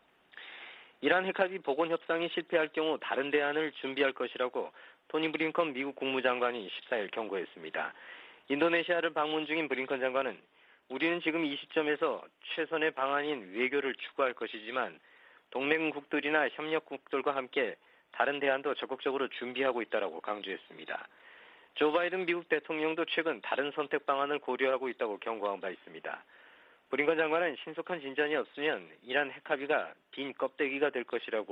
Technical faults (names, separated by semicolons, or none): none